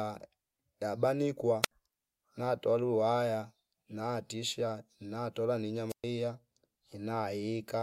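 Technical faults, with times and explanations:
1.62–1.71 s and 5.89–6.04 s, wireless microphone squelch dropout: the speech twice gives way to a short burst of hiss followed by near silence, first for about 70 ms and then, right after "waya natisha natola ni", for about 120 ms. The FM radio link from the microphone weakened until the receiver's squelch shut the output off. The speech comes back once the signal recovers enough to reopen the squelch.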